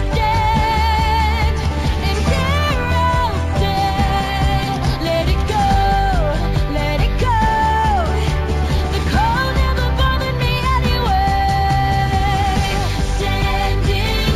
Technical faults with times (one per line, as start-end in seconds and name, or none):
0.00-14.36 imaging from linear upsampling